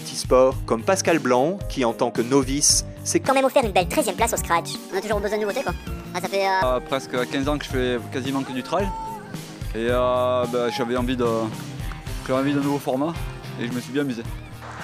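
A section at the wrong speed runs from 3.28 to 6.63 s: the audio suddenly plays 1.46 times too fast, rising by roughly seven semitones and sounding hurried and bright, likely because that stretch was clocked at the wrong rate during editing or playback.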